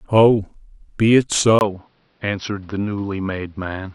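At 1.59 s a 20 ms gap appears, then the speech runs duller to the end: the spectrogram cuts off at 5.8 kHz, a noise floor sits about 40 dB down, and the waveform level stays unchanged. The input was likely switched to a poorer device.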